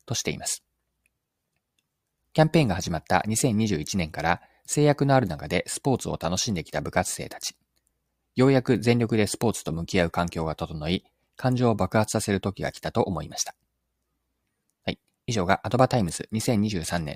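No technical faults can be heard anywhere in the speech recording. There is no point in it that calls for a time to be marked or a problem to be explained.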